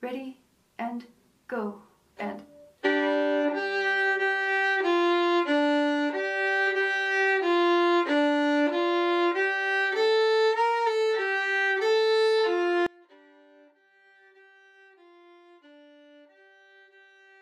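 From 12.87 s to the end, the sound collapses by about 30 dB into a faint residue. This likely comes from one channel inverted, cancelling shared content in mono.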